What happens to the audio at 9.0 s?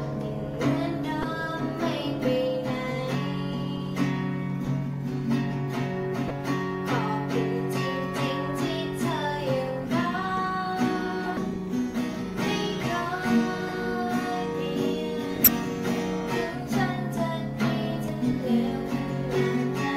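Nothing goes wrong at 9.0 s; the audio plays through that point without any dropout, click, distortion or other audible fault.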